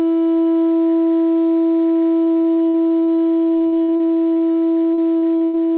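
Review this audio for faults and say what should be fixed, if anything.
Repeated packet loss (robotic sound) affects the music from 2.24 s to 5.58 s. More than two dozen short holes appear across that span, the longest about 91 ms. Each is papered over by extending the preceding sound, so roughly a quarter of the stretch is synthetic fill and the result is choppy, with pieces missing. Unlike a single dropout, the holes recur in quick succession. The whole clip also has the narrow, band-limited sound of a telephone-grade call codec, with nothing above 4 kHz. That fits G.711 A-law at 64 kbps, but it is not a fault. To prevent the packet loss, stabilise the network path and enlarge the jitter buffer, or add forward error correction, so that late or dropped packets stop arriving in bursts.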